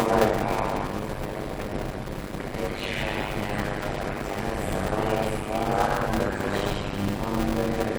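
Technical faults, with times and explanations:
throughout: block size mismatch (padded). One stage passes on shorter blocks than the next stage reads, and the shortfall in each block is filled with silence. This fits 256 samples written into blocks of roughly 480. The repeated gap chops the audio at 100 Hz, laying a steady buzz under everything. Each block carries only about half its worth of sound, so the audio plays at 0.533 times normal speed while staying close to its normal pitch.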